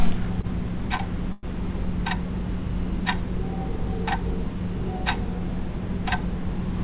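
A packet reached the jitter buffer too late at 0.41–0.46 s and again at 0.97–1.02 s, so the buffer ran dry and the receiver stretched the last sound for about 20 ms each time before resuming where it stopped. These are short stalls from a late packet, each heard as a brief hold with a slight buzz or dip in this everyday-sound recording, with nothing lost.

From 1.32 to 1.46 s, a call audio freeze follows, likely from packets held up in transit that emptied the buffer for longer. For about 110 ms the sound gives way to a fading buzz or hiss rather than silence, and then carries on from the same point. Throughout, the call path passes nothing above 4 kHz, which fits a narrowband G.711 A-law codec.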